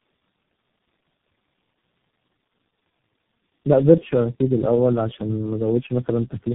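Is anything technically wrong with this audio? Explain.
Yes. Tandem speech coding runs throughout. The speech was decoded and re-encoded across several low-rate codec links. Each generation roughens it further, leaving muffled, warbly speech with nothing above 3.8 kHz.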